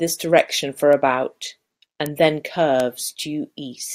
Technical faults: bit error spike

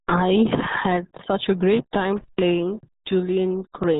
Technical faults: RealAudio 14.4 codec

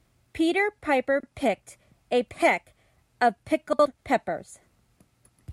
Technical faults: frames out of order

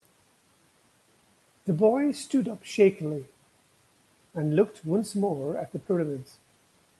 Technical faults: short concealed packet loss

